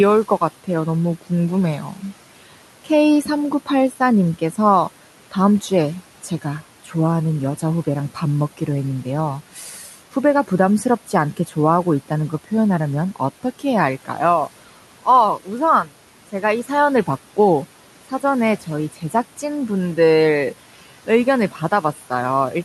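Soft consonants and word endings keep dropping out, sounding swallowed or faint, through five stretches: 0.64 to 8.6 s, 9.52 to 14.09 s, 15.03 to 17.08 s, 18.1 to 19.43 s and 21.07 s to the end. This is speech cut by the noise suppressor, which mistook quiet speech for the room noise sitting about 21 dB below it. It pulled those parts down by up to about 12 dB, over roughly 0.7 s in each of the first two stretches and only about 0.1 s and 0.2 s in the next two.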